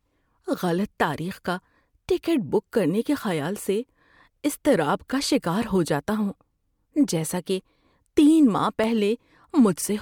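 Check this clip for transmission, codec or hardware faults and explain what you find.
There's one fault here, and it sits near the end of the speech.

Between 8.64 and 9.24 s you get CD scratch ticks: four short clicks, the longest well under a millisecond. A blemish on the disc wipes out more data than the error correction can rebuild, once on each turn, so the player papers over the damaged samples. That gives the regular spacing, roughly five ticks a second, which sounds like an evenly paced ticking of uneven strength on top of the speech.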